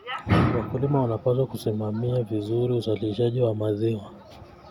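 Nothing stood out on listening to this recording of speech.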